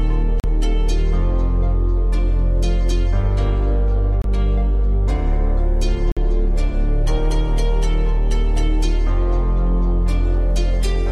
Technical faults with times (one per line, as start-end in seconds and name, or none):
0.40-0.44 Bluetooth stall
4.22-4.26 Bluetooth stall
6.12-6.18 Bluetooth stall